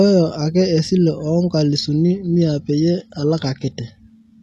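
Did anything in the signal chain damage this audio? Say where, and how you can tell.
Yes. At the network stage, an adaptive stream at a lower bitrate takes over from 1.73 s to the end of the speech. The treble suddenly turns thin and synthetic, with swirly codec artefacts, and there is no dropout at the switch, which fits a fall from 96 kbit/s AAC-LC to 16 kbit/s HE-AAC. On a spectrogram the clean high band ends abruptly at 1.73 s and is replaced by a smeared, patchy upper region. The waveform stays continuous.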